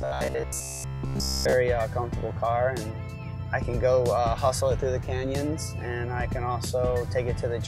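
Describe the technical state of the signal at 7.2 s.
At 7.2 s the signal is intact, with no dropout, distortion, glitch or other technical fault present at that moment.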